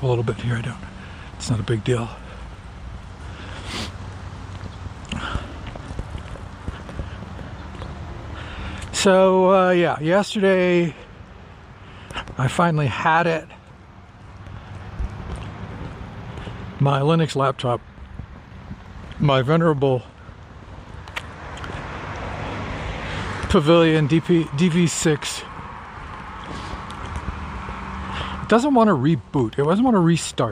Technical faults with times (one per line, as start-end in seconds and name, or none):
none